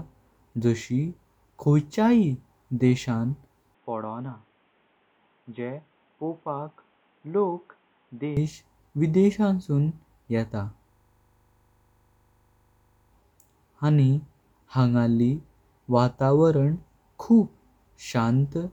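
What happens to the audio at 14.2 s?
Nothing goes wrong at 14.2 s; the speech carries on intact through that moment with no dropout, click, distortion or other fault.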